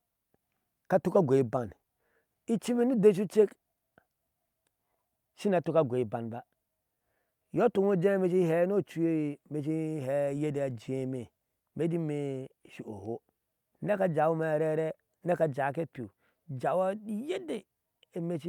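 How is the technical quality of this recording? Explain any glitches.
No technical faults can be heard anywhere in the recording, so there are no glitches to explain.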